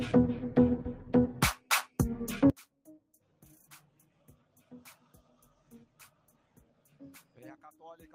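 From 2.50 s to the end, the sound collapses by about 28 dB and what remains is a faint copy. The likely cause is one channel inverted: with one stereo side flipped in polarity, everything shared between left and right cancels when summed to mono, leaving only their small difference. On a waveform the envelope shrinks abruptly at 2.50 s. Within that stretch there is also sound cut by the noise suppressor, between 5.01 and 6.36 s and again between 6.52 and 7.01 s. The suppressor misjudged sustained and decaying parts as noise and pulled them down by up to about 10 dB, around half a second of the first span and a fifth of a second of the second, while sharper onsets passed through. On a spectrogram these show as tails that fade early and patchy dimmed regions behind bright transients. In the waveform, decays taper off sooner than the attacks would suggest.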